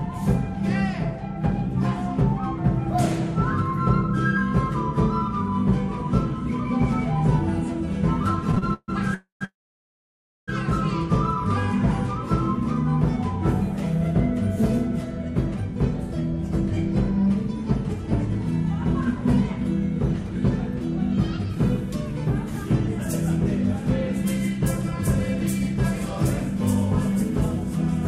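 From 8.51 to 8.90 s the everyday sound breaks into repeated stalls (stutter): four short gaps, together about 206 ms, the longest 143 ms, so just over half of that span is concealment. Each time the jitter buffer ran dry, the receiver extended the last sound until fresh audio arrived. Nothing is lost; the sound simply hesitates and drags through that stretch.

Two call audio freezes follow closely. At 9.14 to 9.43 s the audio holds for about 267 ms, the extended sound dying away into roughly 120 ms of silence. At 9.45 to 10.50 s a longer hold of about 1.03 s fades to around 950 ms of silence. In both, packets were likely held up in transit and the buffer emptied. The audio resumes exactly where it stopped, so the total delay grows by the length of each gap.

From 24.25 to 25.74 s there is a jitter buffer speed-up. The receiver drained surplus buffered audio by repeatedly cutting short pitch-period-sized pieces, about 40 ms in all. 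Playback runs at about 102% speed with pitch unchanged.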